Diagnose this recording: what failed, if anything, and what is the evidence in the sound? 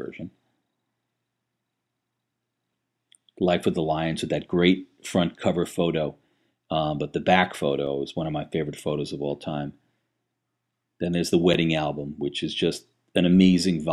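Driver or buffer stage. Blocks of digital silence tick at 7.87 s and 11.54 s. Output buffers went unfilled, leaving 2.9 ms and 5.8 ms of zeros.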